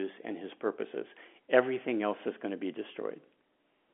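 No technical faults can be heard in this speech.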